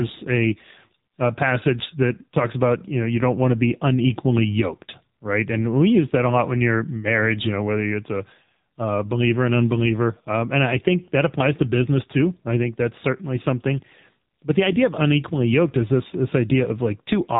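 From start to finish the speech carries AMR narrowband mobile codec damage: nothing above 3.8 kHz survives, and heavy coding leaves a buzzy, synthetic timbre, which fits a low rate near 6.7 kbps. Unlike a simple telephone-band filter, the voice itself sounds rebuilt, not just dulled.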